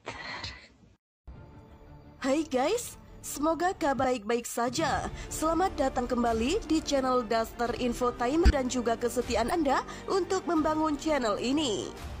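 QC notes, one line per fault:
4.00–4.04 s, 5.95–6.01 s, 8.46–8.50 s, 9.48–9.53 s: damaged data in a compressed stream. At each point a short stretch of the encoded stream is corrupt, so the decoder misreads those frames, loses frame sync and hunts for the next valid header before resuming. Each time the result is a brief chirp or blip of about 45 to 60 ms cutting into the sound, after which playback picks up again.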